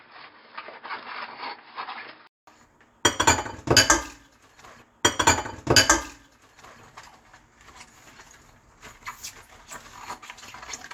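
From 0 to 2.47 s the sound is dull and boxy, with nothing above 5.2 kHz and a faint, different background hiss. Then, after a 200 ms gap, full bandwidth returns with a level jump of roughly 5 dB. This is likely an input switched to a poorer device. The gap and the changed noise floor set it apart from a simple filter.

At 6.81 s the preceding 2 s, from 4.81 s, plays again exactly after a small blip. This is a stream segment repeated, not an echo, because the replay is identical and undecayed.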